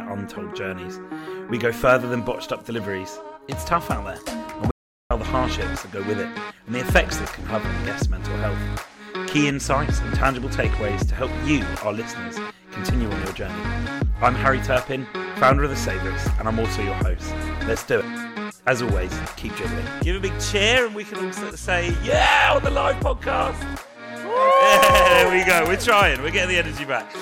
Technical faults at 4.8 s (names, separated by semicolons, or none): audio dropout to silence